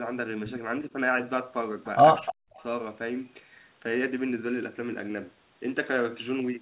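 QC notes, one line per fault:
2.25–2.32 s and 2.57–2.63 s, echo leak: brief delayed copies of the speech, 305 ms late at about 15 dB then about 35 dB below, likely from a far-end loudspeaker the echo canceller missed.
2.28–2.6 s, speech suppressed in double talk: the speech dips by up to about 40 dB for roughly 0.3 s, likely the echo canceller ducking both talkers at once.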